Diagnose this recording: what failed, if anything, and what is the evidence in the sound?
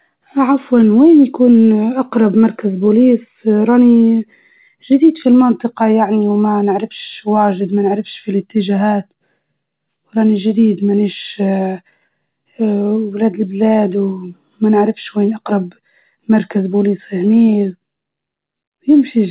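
Nothing stood out on listening to this speech recording, which came through a call path whose band stops at about 4 kHz.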